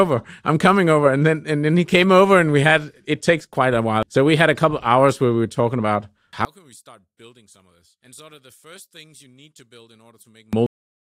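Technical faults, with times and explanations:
6.45 to 10.53 s, one channel inverted: The sound suddenly collapses, dropping by about 28 dB to a faint remnant. The likely cause is reversed polarity on one stereo channel. Summed to mono, the shared centre content cancels, leaving only the small difference between channels.
10.66 s, cut-off end: The audio stops abruptly in the middle of a sound and falls straight to digital silence. There is no natural decay. The final buffers were never written or played, so the tail is simply missing.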